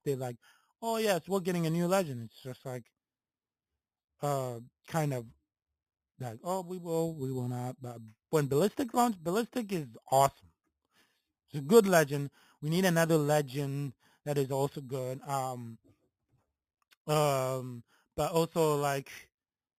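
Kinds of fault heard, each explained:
Imaging from sample-and-hold upsampling: samples were repeated without smoothing, which fits an 8 kHz original rate, so mirror images at 4 to 8 kHz, about 17 dB under the speech, add metallic fizz.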